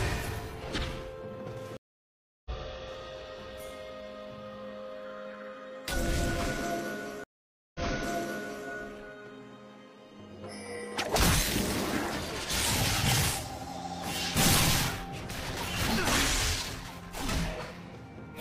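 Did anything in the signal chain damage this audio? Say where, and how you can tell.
Yes: two stream reconnects at the network stage. At 1.77–2.51 s, 685 ms of silence, then audio resumes roughly 0.7 s later. At 7.24–8.67 s, 508 ms of silence, then it resumes 929 ms earlier, repeating material. Each time the connection dropped and a fresh decoder restarted mid-stream.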